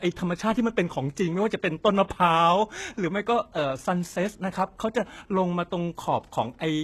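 Throughout the speech, the likely cause is heavy HE-AAC compression at a very low rate, which fits about 16 kbps. Only the lower spectrum is coded and the treble is rebuilt from copied lower bands, so nothing sounds above 12.3 kHz and s sounds turn gritty and metallic.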